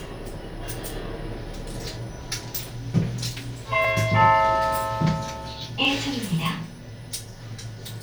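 Clock drift buffer slips from 1.84 to 7.86 s: about four clicks, one every 2.01 s, likely mismatched device clocks dropping or repeating small sample blocks.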